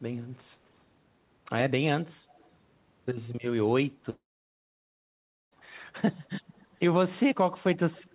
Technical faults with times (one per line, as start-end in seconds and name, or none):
0.69-0.84 echo leak
2.37-2.50 echo leak
4.10-5.53 long network dropout
6.56-6.77 echo leak
7.91-8.13 echo leak